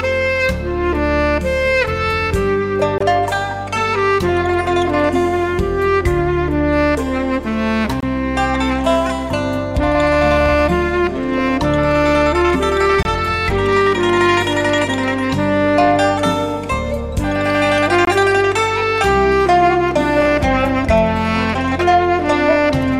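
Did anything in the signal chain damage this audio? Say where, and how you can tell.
Yes. There is a gap between chunks at the storage or playback stage. Short holes of about 23 ms appear at 2.98–3.00, 8.00–8.03, 13.03–13.05 and 18.05–18.07 s. They fall every 5 s, so the audio was handled in 5-second chunks. Silence was inserted at each join, likely through codec padding or late chunk starts. Nothing is lost.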